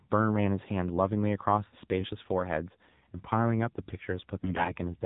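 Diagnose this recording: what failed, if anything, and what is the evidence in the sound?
The codec stage is the main culprit: the speech has passed through the AMR narrowband mobile codec. Nothing above 4 kHz survives, and the voice is plainly buzzy and synthetic, which fits a low AMR-NB mode around 7.4 kbps, where few pulses drive the vocal-tract model.

At the network stage, AMR bit errors corrupt the audio from 4.40 to 4.72 s. A weak link flipped the less-protected bits of each frame, at a rate suggesting around one bit in ten. The core checksum still passed, so misplaced excitation pulses and wrong gains made it through. Pitch and level hold roughly steady, but the voice turns hoarse, scratchy and gargly.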